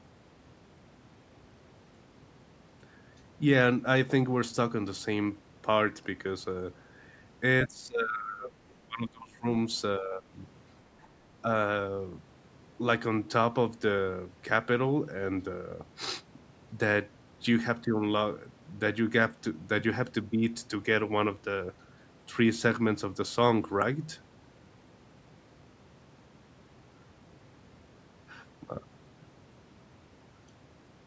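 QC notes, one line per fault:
7.67–9.46 s and 9.99–10.37 s, speech suppressed in double talk: level sinks by around 20 dB in uneven chunks, likely the echo canceller ducking during crosstalk; waveform envelope visibly caves in.
11.02–11.08 s, other side's voice leaking through: a brief, very faint second voice, around 35 dB below the talker, likely residual loudspeaker echo; a thin smear on the spectrogram.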